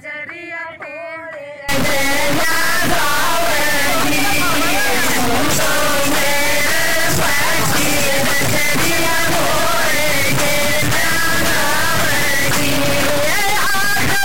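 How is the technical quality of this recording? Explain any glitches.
Technical quality is very poor from 1.69 s to the end, where an integer-read-as-float fault takes over. The sound points to 32-bit integer samples being interpreted as 32-bit floats, so values swing between near-zero and far beyond full scale. It is heard as a harsh, extremely loud buzzing square wave that falls silent in the quietest passages.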